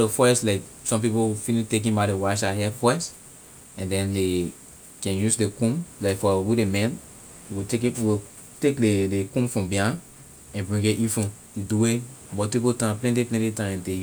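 A short recording of speech, with nothing technically wrong to point out. No event anywhere in it stands out as a fault, so there is nothing to place in time or trace to a cause.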